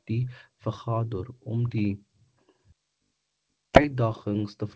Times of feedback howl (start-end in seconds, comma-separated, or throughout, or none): none